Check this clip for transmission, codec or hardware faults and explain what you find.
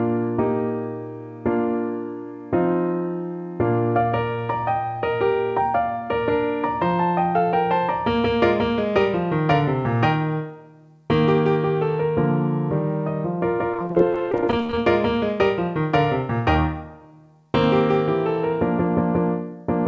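One transmission fault is present. Nothing above 8 kHz is audible, which fits a wideband call codec such as G.722. From 13.72 to 14.78 s, repeated packet loss (robotic sound): dozens of gaps up to about 26 ms are patched by extending prior audio, about a third of that stretch, giving choppy sound with pieces missing.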